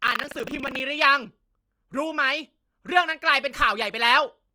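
Speech runs through the whole clip with a rough, grainy texture: tones turn noisy rather than swirly, while the full bandwidth stays open up top. That pattern is the signature of Opus compression in its music-style mode, which keeps every band's energy and patches starved bands with folded or noise-like content. Plainly audible damage of this kind likely comes from a low bitrate, consistent with something around 24 kbps. For the first 0.8 s, from 0.0 to 0.8 s, a robotic rattle sits on the audio, pulsing at about 25 Hz, present only while sound is playing. This is buffer tearing: the writer and the reader of the ring buffer have slipped against each other. About a fifth of each 40 ms period is replaced by audio from roughly 70 ms earlier, spliced in with hard joins at both ends.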